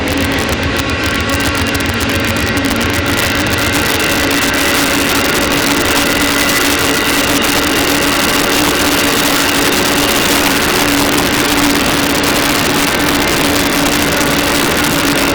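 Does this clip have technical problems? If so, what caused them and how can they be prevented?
Yes. Integer overflow runs throughout: the signal is driven about 6 dB past full scale, and the small share of peaks that exceed it wrap to the opposite extreme, giving violent cracks rather than the duller flattening of clipping. Prevent it with saturating arithmetic or limiting before integer conversion.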